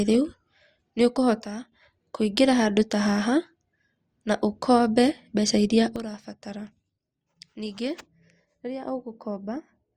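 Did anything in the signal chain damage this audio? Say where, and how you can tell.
Yes: a sudden gain jump at 1.43 to 1.72 s, just before "kũingĩra handũ ta haha", drops speech and noise floor together by about 11 dB. Another, about 12 dB, starts at 5.96 s after "na ukombe mbeca iria" and lasts to the end. Likely cause: an unramped digital gain change in processing.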